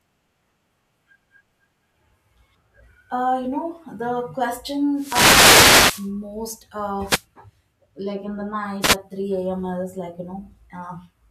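Bursts of static swish over the speech from 4.94 to 6.11 s, 7.04 to 7.25 s and 8.81 to 8.96 s: wireless microphone noise hits, where reflections cancelled the FM signal and receiver noise rose.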